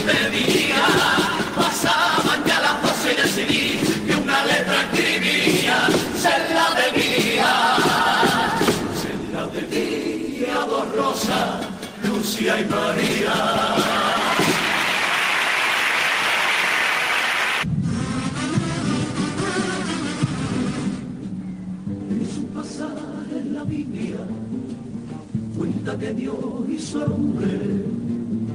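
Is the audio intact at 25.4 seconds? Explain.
Yes, the audio is intact at 25.4 seconds, with no dropout, click, distortion or other fault audible at that moment.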